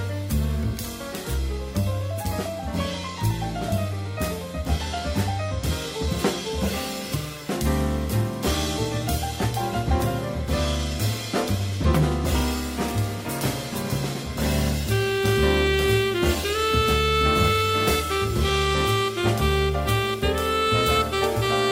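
No technical fault can be heard anywhere in the audio, so there is nothing to time or trace to a cause.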